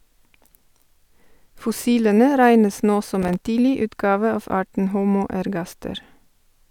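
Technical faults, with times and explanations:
3.15–3.41 s, processor overload crackle: after "regnes nå" the speech turns to gritty crackle until "tidlig utgave av arten". A dozen or more missed deadlines on buffers of about 1.5 ms leave hard-edged silent gaps that chop the waveform into a rapid tearing.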